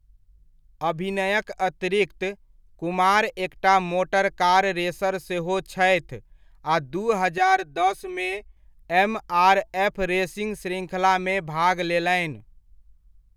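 From 7.38 to 8.57 s, speech sounds hollow and phasey: channel delay (comb filtering). One channel lags about 3 ms, so mono summing notches near 200 Hz upward.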